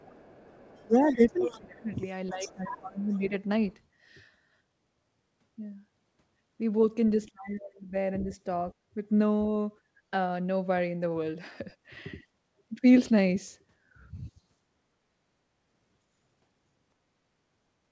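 From the very start to about 3.28 s, a second, fainter voice sits underneath the speech, roughly 15 dB below it. This is the other side's voice leaking through. The far end was most likely playing on the talker's loudspeaker and reaching the microphone, and the echo canceller didn't remove all of it, so its remainder travels on with the near-end speech.

Inside that same stretch, from 0.8 to 1.9 s and again from 2.31 to 3.32 s, the main speech sinks, dropping by something like 20 dB at its lowest. At 7.27 to 7.94 s it happens again, deeper still, around 30 dB down. This is speech suppressed in double talk: with both sides likely talking at once, the canceller couldn't tell its own talker from the loudspeaker echo and turned everything down together.

Twice the room sound itself drops out briefly: at 8.74 to 8.95 s it falls by about 27 dB, and at 9.82 to 10.0 s by a shallower 11 dB or so. 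Each dip lasts about a fifth of a second before the ambience returns. This is background gated by the echo canceller. While the loudspeaker was active, the canceller clamped the microphone hard and released it once playback stopped. Throughout, the audio is band-limited at 8 kHz, as the G.722 call path delivers it.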